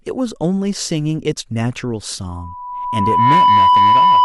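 At 2.29 s a loudspeaker feedback squeal kicks in: the mic is hearing its own speaker, and the loop gain tips past one at about 989 Hz. That tone swells over roughly a second until it sits well above the speech and howls right to the end.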